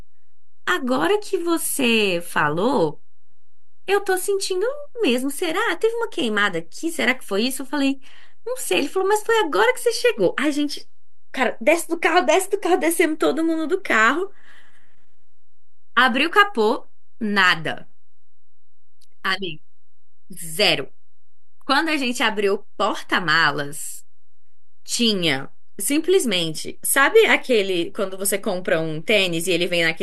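Nothing about the sound itself gives this fault away, because a constant shift carries no audible tone, but a DC offset runs through the whole speech recording. The waveform sits displaced from zero by a fixed amount, at about -30 dBFS, so one side of the signal reaches full scale sooner and headroom is lost. A spectrum shows it as steady energy at 0 Hz, present from start to finish regardless of what is being said.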